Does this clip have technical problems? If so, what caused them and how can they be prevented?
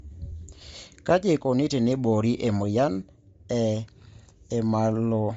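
Yes. Throughout the speech there is a grainy, breathy edge and nothing above 7.7 kHz. This is likely Bluetooth LC3 compression at a rate that fits about 32 kbps. Unlike a plain low-pass filter, it leaves hissy, noise-filled texture instead of simple dullness. Recording over a wired connection or raising the LC3 bitrate would prevent it.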